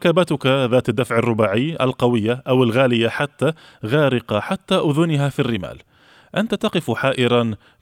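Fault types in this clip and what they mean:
No technical faults can be heard in the signal; the speech keeps continuity throughout, with no dropouts, distortion or other disturbances.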